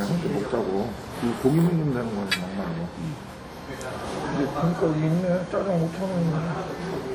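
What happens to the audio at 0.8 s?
At 0.8 s the audio carries the same WMA compression damage heard through the whole clip, most likely from a low-rate encode in the region of 48 kbps. The transform codec spreads its quantisation noise over tens of milliseconds and drops weak components, so the sound rings and washes, with a hiss that swells and fades with the signal. On a spectrogram, sparse blocky patches and gaps show where fine detail was zeroed.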